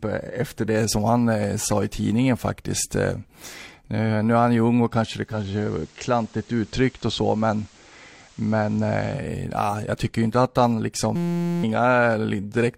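From 5.22 to 9.28 s, after "ung och kanske det" and until "ah jag tycker inte", digital radio blends to analogue FM. A smooth 196 ms crossfade, hiss around 30 dB down and level about 1 dB lower distinguish it from an abrupt dropout.

From 11.16 to 11.63 s, after "tycker inte att han", a system hang loop repeats one 5.8 ms piece, which fits a 256-sample buffer. It makes a steady 172 Hz buzz, not a stutter, replacing roughly half a second of speech.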